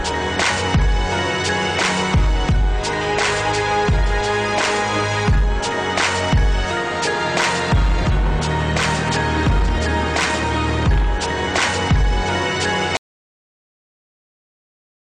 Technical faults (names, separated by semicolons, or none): audio dropout to silence